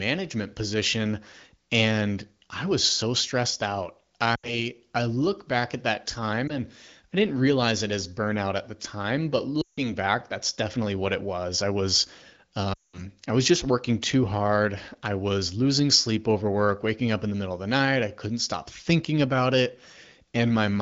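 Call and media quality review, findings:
Lost AMR speech frames at 4.35–4.64 s (after "was so stressed out"), 6.47 s (after "look back at that"), 9.61–9.86 s (after "at the time but") and 12.73–13.04 s. The decoder repeats the last pitch and vocal-tract settings at falling gain: brief warble dropping to near silence within two frames, consistent with about 80, 20, 160 and 200 ms of missing 20 ms frames. Spectrogram shows smeared, static harmonics decaying into a gap. Waveform shows a tapering envelope. The AMR-WB wideband path shows light codec colouring.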